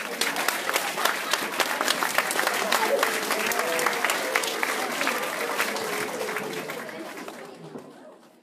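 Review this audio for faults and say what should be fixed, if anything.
No faults heard, no fixes.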